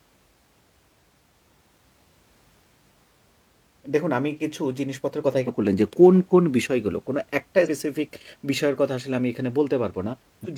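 A speech clip marked by three brief bursts of damaged data in a compressed stream, at 5.44–5.49 s, 7.62–7.69 s and 10.41–10.47 s, each lasting about 50 to 65 ms. Corrupted bytes make the decoder misread frames and lose sync until it finds the next valid header.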